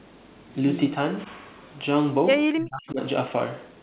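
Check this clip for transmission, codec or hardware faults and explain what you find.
One fault stands out. From 2.47 to 3.00 s the speech drops by around 35 dB, likely speech suppressed in double talk, where the echo canceller mistook simultaneous talk for echo. The band above 4 kHz is absent throughout, which fits the G.711 mu-law call codec.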